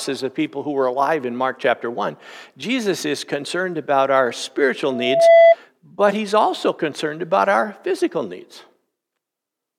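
A single 669 Hz tone swells over roughly 0.4 s into a piercing squeal, about 10 dB above the speech, from 4.90 to 5.55 s, after "concerned about our spiritual" and before "but he's also concerned". This loudspeaker feedback squeal arises when the microphone picks up its own loudspeaker and the loop gain at that frequency exceeds one.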